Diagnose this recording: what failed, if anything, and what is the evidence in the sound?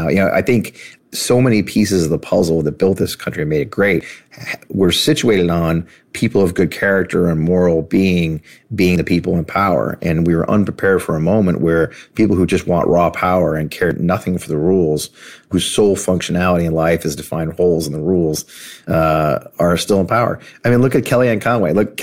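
Audio is missing between chunks at 4.01 s, after "country and made it", and at 13.91 s, between "want raw power and" and "nothing for the rules". About 50 ms vanishes with the two sides butted together, not a dropout's silent gap. The likely cause is a 5-second buffer handover losing samples.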